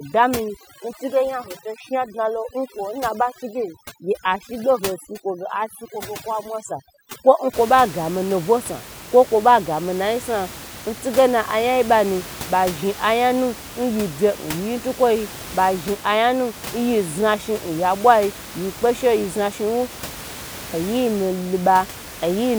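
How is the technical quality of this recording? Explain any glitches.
The main problem is heavy-handed noise reduction at the start of the speech. Room noise sits about 15 dB below the voice.

From 0.0 to 7.54 s you get overdone noise removal. The denoiser was pushed so hard that any frequency band close to its idea of the noise floor got slammed down or shut off entirely, and the softer parts of the voice got caught too. So the background in the gaps drops and breaks up into little twinkly artefacts.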